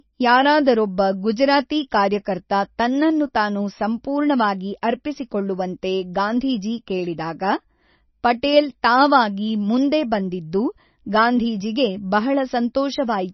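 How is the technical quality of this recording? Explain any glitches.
The recording is heavily compromised by lossy coding, with one audible smeared attack.

MP3 compression runs through the whole speech clip. Nothing is present above 5.9 kHz, and that hard treble ceiling, with the watery, swirling texture on sibilants, is most likely the result of MP3 encoding at a very low bitrate, around 26 kbps. Starved of bits, the encoder cuts the top band and drops weak frequency lines that flicker in and out between frames. On a spectrogram this shows as a flat ceiling at 5.9 kHz and patchy, blotchy energy below it.

Pre-echo occurs at 4.82 s, between "ಕಾರ್ಯಕರ್ತ ತನ್ನನ್ನು ತಾನು ಸಂಪೂರ್ಣವಾಗಿ" and "ಅರ್ಪಿಸಿಕೊಳ್ಳುವಂತೆ ಗಾಂಧೀಜಿ ಕೇಳಿದಾಗ". A sharp onset fell late in a transform block, so quantisation noise sized for the loud attack spread backwards into the quiet moment just before it, about 12 ms. It is heard as a brief hiss leading into a softened attack. 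On the waveform, low-level noise rises just ahead of the transient, and the spectrogram shows a faint broadband smear before the onset.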